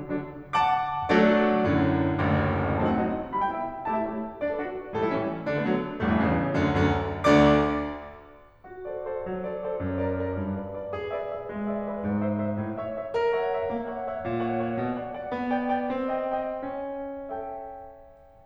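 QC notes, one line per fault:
No faults found in the music. Nothing in the audio needs a timestamp or a note.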